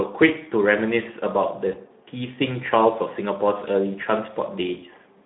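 Throughout, the speech sounds hoarse, grainy and narrow, confined to roughly 150 Hz to 3.6 kHz. This is Speex codec damage, with a sparse excitation that fits about 11 kbps. At 1.71 to 1.76 s and again at 4.73 to 4.78 s, the voice briefly smears into a buzzy tone or coloured noise that fades. This is VoIP packet loss concealed by the speech codec, with the decoder extrapolating across one lost 20 ms frame.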